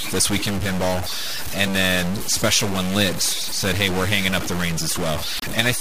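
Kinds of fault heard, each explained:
Stuck bit: distortion runs through the whole speech clip, and the pauses are filled with noise instead of silence. This is likely one data bit held at a fixed value. Clipping would not fill the gaps this way.
Broken MP3 bit reservoir: from 5.37 to 5.44 s the speech jumps ahead and a brief glitch sounds. A frame likely read another frame's bytes after a cut, across about three 26.1 ms frames. A simple dropout would leave clean silence instead.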